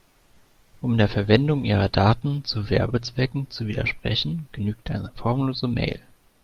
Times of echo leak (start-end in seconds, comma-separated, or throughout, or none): none